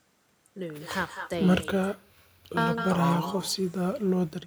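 From the first syllable to the end, the speech carries echo with no canceller. Each phrase returns roughly a fifth of a second later as a copy only about 7 dB below the original, and thinner. That delay and level point to the far end playing the call on a loudspeaker and its microphone sending it back unremoved. Room reverberation would instead smear smoothly into the tail, not repeat as a distinct, lagging second voice.

From 1.64 s to 2.57 s, about 0.93 s of signal vanishes in an audio dropout to a faint residue. The speech cuts off abruptly and returns just as abruptly. The gap holds only a faint trace of sound, far below normal level, so the path stayed live. A likely cause is a brief loss of the incoming stream. The hard edges and the lingering trace separate this from a natural pause or a fade, which would fall to silence or taper gradually.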